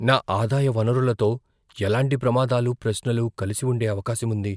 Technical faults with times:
none

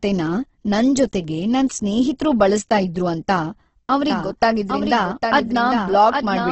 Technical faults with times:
0.00-6.51 Opus compression
4.10-6.51 doubled audio track

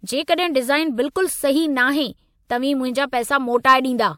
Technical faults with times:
none

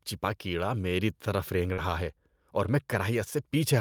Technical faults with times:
1.73-1.80 short concealed packet loss

